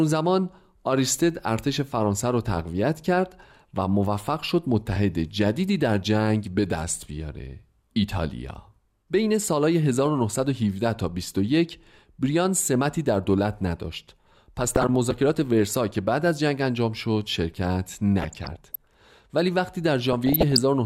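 Weak DAB reception lets bit errors, at a rate of a few tenths of a percent, slip past error correction into the MP2 data of this speech clip, producing DAB burbling at 14.59 to 14.95 s, 18.17 to 18.76 s and 20.13 to 20.58 s. Corrupted samples put short blips of noise into single sub-bands, and corrupted scale factors make sub-bands jump in level for up to a frame, so each burst comes across as noisy sub-band disturbances laid over the speech.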